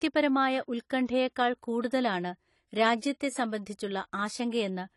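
From start to finish, the speech carries AAC compression damage. Nothing sounds above about 11.5 kHz. The top of the spectrum is simply gone. The likely cause is AAC-LC coding at a low bitrate, which fits something near 32 kbps. The encoder divides each frame into frequency lines and spends too few bits on them. It drops the highest band and coarsens what remains. The damage is plain to hear. The speech sounds dull and smeared, with a fizzy edge on sibilants.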